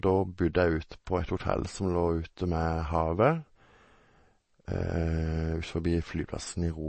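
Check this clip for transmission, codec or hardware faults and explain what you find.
One fault runs through the whole clip: MP3 compression. The speech sounds plainly watery and dull, with nothing above 8.3 kHz. The likely cause is a bit-starved encoder at around 32 kbps, cutting the treble and switching weak components on and off.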